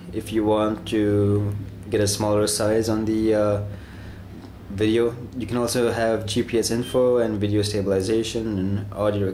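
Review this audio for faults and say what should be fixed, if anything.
No faults turn up in this audio, so nothing needs to be fixed.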